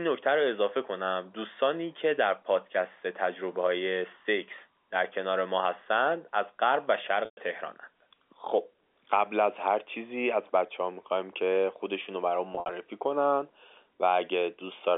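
At 7.25 to 7.37 s, packet loss with pitch repetition removes 120 ms of speech. The receiver loops the last pitch period, giving a brief held buzz that fades out over roughly 50 ms, then goes quiet before the speech cross-fades back. At 12.53 to 12.69 s, 100 ms is lost in scattered pieces, the longest 60 ms, so the sound stutters into short buzzy holds. Unlike a bare dropout, each gap starts with a frozen tone, not an abrupt silence or click, all within the narrow G.711 telephone band.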